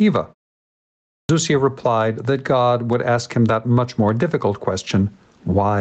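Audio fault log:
Throughout: gain pumping. Loud and soft parts sit closer in level, a swing of roughly 15 dB, likely from gain set far too high with a fast limiter clamping it.
1.2 to 1.29 s: clipped start after a pause. After a 0.94 s silence, about 91 ms of onset is lost, so "replied that" begins abruptly without its first sounds, as the output device wakes late. The waveform jumps from flat silence straight into speech.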